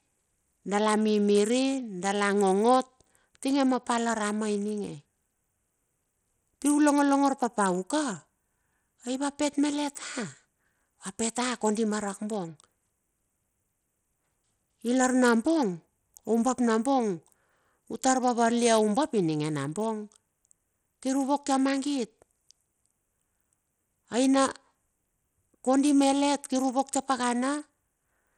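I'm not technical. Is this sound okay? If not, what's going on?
No. The speech sounds gritty and rough all the way through. Its crisp top end seems to flicker in and out. This is Bluetooth SBC compression, likely from a wireless link that squeezed the sound hard and dropped fine detail to save data.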